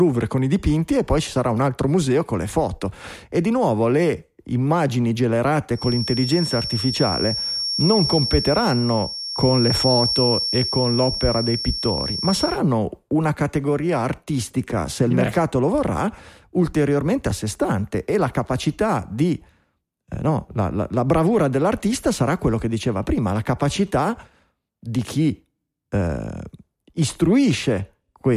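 From 5.71 to 12.61 s, after "di nuovo le immagini" and until "una categoria artistica se", a feedback whistle sits behind the speech. A thin, steady tone near 5.5 kHz swells and fades slowly, a few decibels below the voice. A speaker-to-microphone loop hovering at the edge of feedback is the likely cause.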